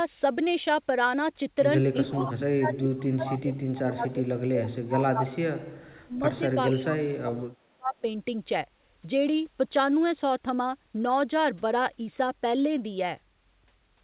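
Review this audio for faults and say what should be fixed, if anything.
Speech suppressed in double talk occurs from 2.03 to 5.67 s and from 5.87 to 8.05 s. The speech dips by up to about 35 dB, in pieces. The likely cause is an echo canceller mistaking overlapping talk for echo. Better double-talk detection would prevent this.

Echo leak appears at 2.19 to 2.31 s and 3.27 to 3.38 s. A copy of the speech returns 425 ms late, about 10 dB below it. It likely slipped past the far end's canceller. Stronger echo cancellation there would fix it.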